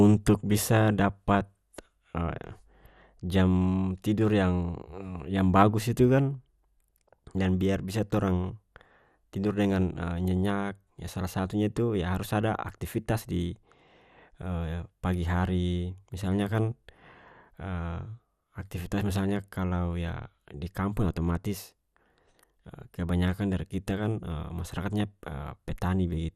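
Throughout, the speech sounds dull, with nothing above 14.4 kHz and a gurgling, granular roughness as upper sub-bands drop in and out. The likely cause is MP2 compression at a rate near 80 kbps. A plain low-pass filter would sound steady, not flickering and grainy.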